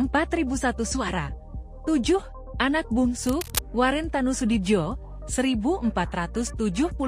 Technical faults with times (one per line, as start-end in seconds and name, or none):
3.27-3.59 cable scratch noise